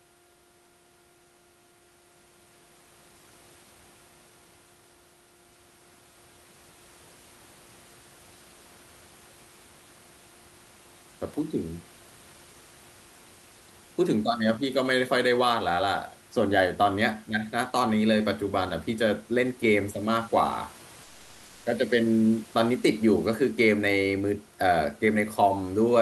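From 21.03 to 21.65 s, about 620 ms of speech gives way to steady noise or near silence, likely sound dropped by the voice detector, with Opus DTX comfort noise filling in.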